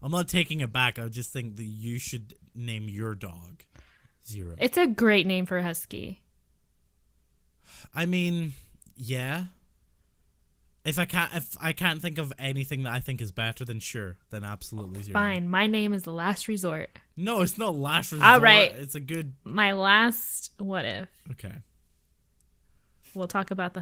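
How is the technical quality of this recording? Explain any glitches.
The recording has no glitches to explain. The Opus voice compression on this speech is audible only as light coding, with the full band kept, which fits the hybrid mode at a moderate bitrate.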